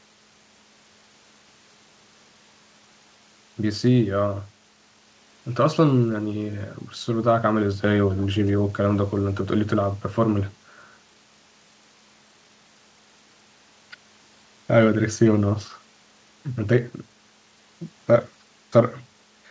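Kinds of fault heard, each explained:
No faults are present in the signal; the speech has come through a call path that leaves nothing above 8 kHz, which fits a wideband G.722 codec running at 64 kbps.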